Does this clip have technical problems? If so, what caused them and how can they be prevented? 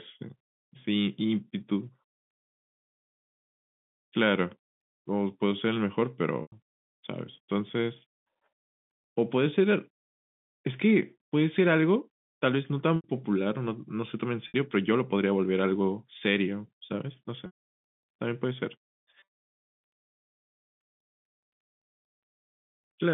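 Yes. Packet loss with pitch repetition occurs at 6.42, 12.96, 14.48, 17.46 and 19.2 s. At each gap the receiver loops the last pitch period. The 100, 80 and 60 ms losses sound like a briefly held, buzzy tone. The 280 ms loss at 17.46 s fades to silence before speech cross-fades back. At 19.2 s, 240 ms is lost in scattered bursts over 320 ms, the longest 80 ms. Forward error correction, an adaptive jitter buffer and QoS prioritisation of voice traffic would prevent it.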